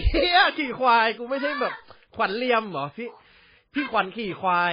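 Right from the start the speech is dull, with nothing above 5 kHz, and it has that watery, swirly texture with smeared consonants. It's likely heavy MP3 compression at a very low bitrate, somewhere around 17 kbps, where the encoder chops the top end and lets weak frequency lines flicker in and out between frames.

From 0.07 to 0.47 s there's hard clipping on top of that. The peaks are being driven about 5 dB past what the stage can pass, so they get sliced flat. That adds crackle on the peaks of that opening stretch.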